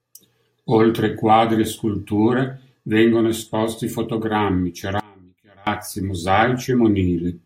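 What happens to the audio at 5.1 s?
At 5.1 s the speech is inside an audio dropout to a faint residue, running from 5.00 to 5.67 s, right after "sculture vengono esposti fotogrammi". For about 0.67 s the signal collapses abruptly to a faint leak, roughly 25 dB below normal, then snaps back. The likely cause is the source feed breaking while the downstream path stayed live. On a waveform the envelope drops to a thin sliver with sharp edges, and on a spectrogram the band is dim but not blank.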